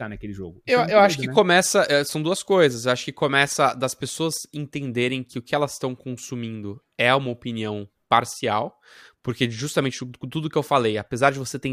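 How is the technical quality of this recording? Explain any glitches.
No glitches or technical faults can be heard anywhere.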